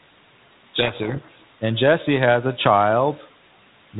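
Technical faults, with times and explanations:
0.78 to 1.48 s, codec payload misread: the decoder takes the G.726 code words in reversed bit order, so speech drowns in harsh, rasping distortion.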